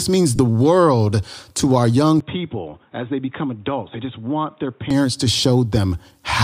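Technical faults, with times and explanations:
0.36 to 0.39 s, lost LE Audio frames: just before "world to our young", a 30 ms stretch turns into a brief noisy smear rather than a clean gap. That length fits about four 7.5 ms frames. The decoder filled the hole by repeating the last spectrum with scrambled phase signs, so tonal speech energy becomes hiss-like texture. A plain dropout would instead give a hard silence with clicks. This loss is too short to reach the gradual fade into silence.
2.20 to 4.91 s, input switched to a poorer device: after "world to our young", the sound abruptly turns dull and boxy, and nothing remains above 3.8 kHz. The level drops by roughly 10 dB, and a new noise floor appears around 40 dB below the speech. There is no silence at the change, and the fuller sound returns cleanly at 4.91 s. The cause is most likely a change to a narrower-band microphone or a headset call profile. 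The light graininess, likely from the LC3 coding, runs through the whole clip. This fault differs from it because the tone, level and noise all shift together at definite moments.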